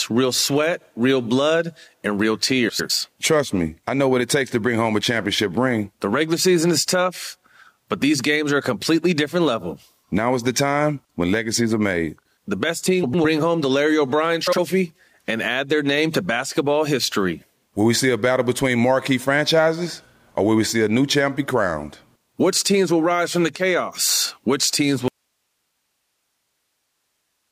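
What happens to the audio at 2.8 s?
Right after "real blood and real", from 2.69 to 2.91 s, the frames are out of order: two adjacent blocks of about 104.5 ms, which fits two runs of four frames each, play swapped. That gives a garbled flutter. Unlike a dropout or skip, no time is lost.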